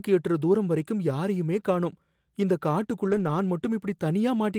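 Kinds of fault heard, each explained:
Lost packet rebuilt from error correction, 3.07 to 3.29 s: several packets went missing, but each following packet carried a low-bitrate backup copy that the decoder played instead. There is no gap, just about 120 ms of rougher, noisier speech, which fits six 20 ms packets.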